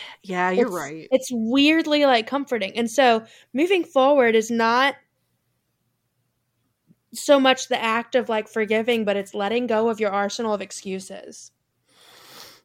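Clock slip clicks run from 1.27 to 12.02 s: around ten faint, evenly spaced ticks, roughly every one and a half seconds, heard over the speech. They likely come from two unsynchronised clocks about 15 ppm apart, with each tick fitting a single dropped or repeated sample.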